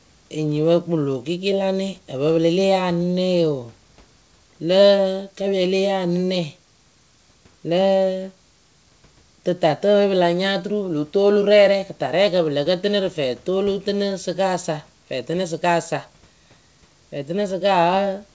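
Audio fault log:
No faults found.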